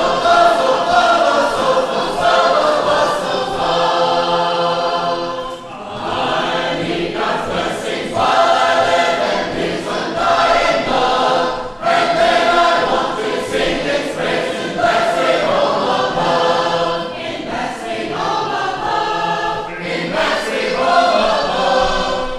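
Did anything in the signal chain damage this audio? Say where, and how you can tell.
No, nothing in the signal chain damaged this audio.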